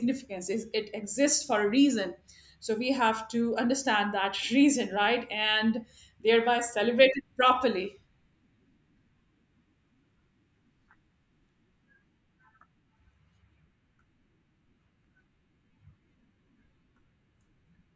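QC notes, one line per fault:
No audible technical faults turn up anywhere in this speech recording.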